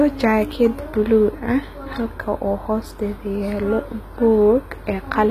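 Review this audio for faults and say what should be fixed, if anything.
HE-AAC compression runs throughout: the speech's treble sounds regenerated rather than real, with s sounds gritty and metallic and nothing above 14.9 kHz, likely from spectral band replication copying lower bands upward, consistent with a low bitrate around 20 kbps. Encode at a higher bitrate or use a full-band codec so the treble is coded directly.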